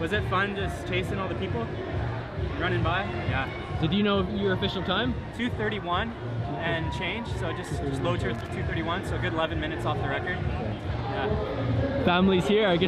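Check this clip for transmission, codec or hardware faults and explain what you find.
There is one hardware fault: a burst of loose connector crackle from 8.35 to 8.49 s, lasting about 0.14 s. A worn or dirty contact in the signal path is making and breaking rapidly as it shifts, chopping the audio on and off, with any DC on the line adding sharp pops. It is heard as a short, irregular scratchy crackle. On a waveform it shows as jagged dropouts and spikes; on a spectrogram, as scattered vertical broadband streaks.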